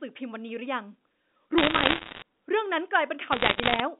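Telephone-band speech (roughly 200 Hz to 3.7 kHz, G.711 A-law) carries bursts of sharp ticking crackle from 1.58 to 2.22 s and from 3.32 to 3.80 s. These are bit errors on a digital phone line, with a percent or two of bits flipped, each one corrupting a single sample.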